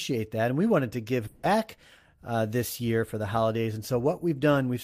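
Speech, with a long network dropout from 1.27 to 1.45 s, right after "we wanted to": the last sound smears into a fading buzz or hiss for about 160 ms, and the speech resumes with that stretch missing. Unlike a plain mute, the gap is filled rather than silent, likely from receiver concealment covering lost audio.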